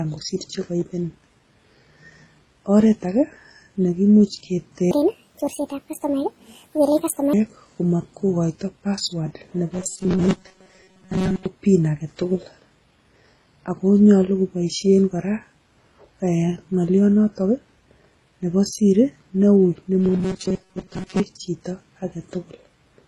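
Speech runs the whole clip with a dull, smeared quality: the top end is cut off, and two different kinds of artefact sit on top of each other, a swirly, watery texture over a coarser grittiness. That combination is the mark of transcoding between lossy codecs. The sound likely went through MP3 and then HE-AAC, which fits a low-rate MP3 at around 32 kbit/s re-encoded to HE-AAC at around 16 kbit/s, with the later encoder spending bits on the earlier one's damage while the narrowest bandwidth in the chain survives. From 4.91 to 7.33 s the speech becomes hurried and chipmunk-like, running 1.61 times too fast and raised by roughly seven semitones, with pitch and pace jumping together at the boundaries. This is a section at the wrong speed, likely a stretch played or edited against the wrong clock so that tempo and pitch shift as one. From 9.74 to 11.46 s, and again from 20.00 to 21.20 s, the speech collapses into a rigid, metallic buzz at 188 Hz that still loosely tracks the syllables. 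That is robotic sound from repeated short buffers. A block of about 5.3 ms was likely being looped whenever fresh audio failed to arrive, so most of the real signal in those spans was skipped and the loop rate imposed its own fixed pitch.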